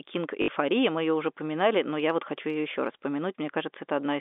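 At 0.42 to 0.48 s there's packet loss with the last packet repeated: about 60 ms gone, patched by looping one packet, likely three 20 ms packets, so you hear a 50 Hz robotic stutter.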